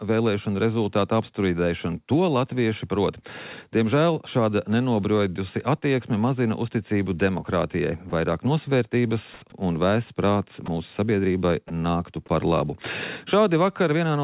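At 8.1 s, 10.66 s and 11.68 s there are brief instances of sound dropped by the voice detector, each about 20 ms long. The sender's detector likely mistook a quiet stretch of active sound for background and stopped sending, so the receiver filled the gap with synthetic noise. Each one is a tiny hole where the sound gives way to flat hiss. On a waveform it shows as a sudden narrow patch of low, even amplitude. On a spectrogram it appears as a thin vertical stripe of uniform, texture-free energy that breaks the surrounding detail.

From 9.34 to 9.42 s, comfort noise stands in for the background for about 80 ms. The real ambience, sitting about 28 dB below the loudest sound, is likely swapped for generated noise after discontinuous transmission paused the stream. The replacement is about 3 dB off the original level and smoother. On a spectrogram the fine grain of the background turns into a featureless wash. 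The waveform shows an evenly filled block. Across the whole clip nothing appears above 4 kHz, which fits a G.711 mu-law call codec.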